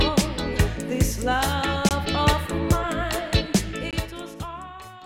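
The sound stops twice with a gap between chunks. The holes run from 1.89 to 1.91 s and from 3.91 to 3.93 s. Each lasts 20 ms. They fall 2.0 s apart, matching a chunk length of 2.0 s. Nothing is missing from the sound. It is split at each join, with silence inserted between chunks. Codec padding or a player starting each chunk late would do this.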